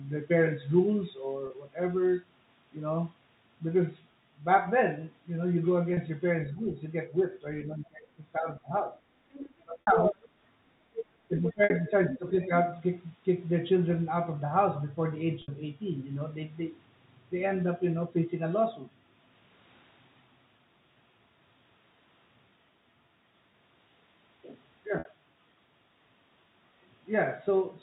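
At 1.47 s and 5.94 s, 30 ms gaps are bridged by packet loss with pitch repetition. The receiver loops the last pitch period. Each sounds like a brief, buzzy held note.

From 6.52 to 8.96 s the speech dips in patches, by about 15 dB at worst. This is likely speech suppressed in double talk. The echo canceller turns the talker down while the far side speaks.

From 9.32 to 10.29 s, the other side's voice is leaking through, about 5 dB under the talker. Residual loudspeaker echo is the likely cause. From 9.63 to 10.17 s the talker drops by about 25 dB, likely through double-talk suppression. At 9.81 s a 60 ms loss repeats pitch and fades toward silence.

From 10.93 to 12.47 s the far voice leaks again, about 10 dB down, likely as uncancelled echo. From 11.29 to 12.5 s the talker dips by about 10 dB, likely double-talk suppression again. At 11.64 s there is another 60 ms concealed loss.

Further 60 ms losses at 15.42 and 24.99 s fade briefly, and the speech returns with a short cross-fade. 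The telephone band stays within 4 kHz throughout.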